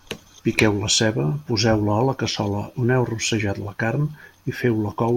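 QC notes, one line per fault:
No audible faults in this speech clip.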